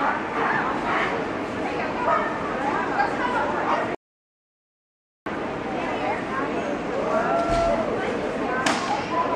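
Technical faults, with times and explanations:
3.95–5.26 s, audio dropout to silence: the input was likely lost while silence kept being written, cutting the sound mid-flow into 1.31 s of dead silence with no room tone.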